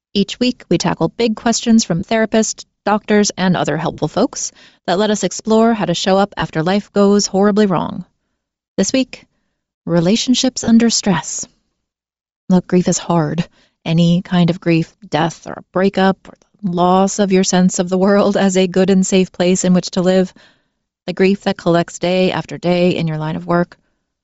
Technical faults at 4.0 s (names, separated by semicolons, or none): Bluetooth LC3 compression; lost LE Audio frames